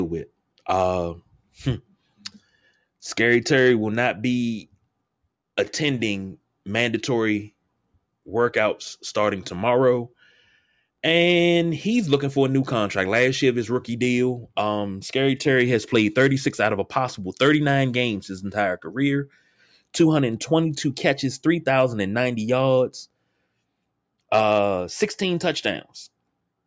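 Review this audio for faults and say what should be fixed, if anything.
Nothing here needs fixing, as the speech signal holds steady with no technical faults anywhere in the recording.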